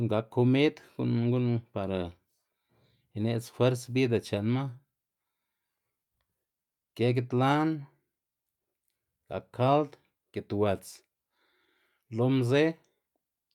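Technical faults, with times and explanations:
No technical faults can be heard anywhere in the speech. There is nothing to mark with a time or explain.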